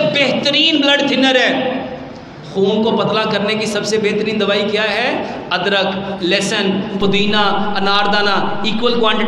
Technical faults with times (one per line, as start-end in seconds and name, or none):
4.90-4.97 loose connector crackle
7.02-9.28 DC step